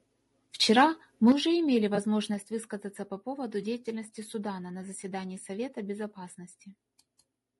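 The whole clip of speech has a rough, grainy texture, with noise filling the gaps between the harmonics and a top end that sounds thin and a bit synthetic. That's the signature of low-delay AAC compression, likely AAC-ELD running at around 32 kbps. Its short frames can't resolve the voice's pitch structure well at that rate, so the damage is plainly audible from start to finish rather than confined to any one moment.

Early on there are two spots of microphone overload. From 0.77 to 0.83 s the peaks push about 2 dB past the converter's limit, clipping a small fraction of samples. From 1.27 to 1.32 s it's worse, about 3 dB over with maybe a tenth of samples flattened. Both give the loudest syllables a harsh, crackly edge, likely because the input gain was set too high and the converter ran out of headroom.

Right after that second overload, at 1.32 s, the level drops abruptly by about 7 dB, voice and background together. 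That's the microphone volume stepped down, likely the call software reacting to the clipping by pulling the device's input gain down in one jump. A second, smaller step of about 3 dB follows at 2.34 s, again a sudden drop in everything at once rather than a fade.

Between those, from 1.95 to 1.99 s, there's a brief smeared or phasey blip lasting about 20 ms, which fits a single lost frame. This is AAC frame loss with concealment. The decoder patched the gap by reusing the last good spectrum with its fine detail scrambled, so instead of a dropout you hear a short, noisy smudge where the sound should continue cleanly.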